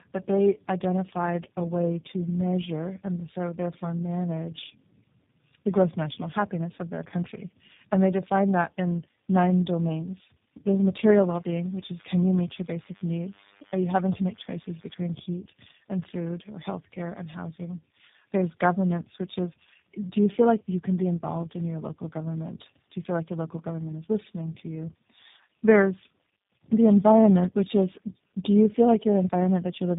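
Throughout the clip, the speech shows tandem speech coding: it has passed through three low-rate speech codecs in a row, each decoding and re-encoding the previous coder's already damaged output. The combined character fits a GSM full-rate, iLBC and G.729A chain joined by G.711 links. The errors compound, so speech sounds rough, muffled and warbly, with nothing above 3.7 kHz.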